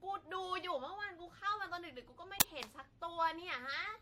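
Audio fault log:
throughout, generation loss: Swirly, hollow smearing with blurred consonant onsets and no content above 16.8 kHz, likely from around four rounds of lossy re-encoding on shifting frame grids, consistent with AAC-LC near 64 kbit/s. A single encode at that rate would sound cleaner.
2.40 s, uninitialised buffer: A loud, harsh burst of digital noise lasting about 12 ms, where stale memory was played out as samples before real audio filled the block, which fits a 512-sample buffer. Unlike a click or dropout, it is broadband garbage rather than a single step or silence.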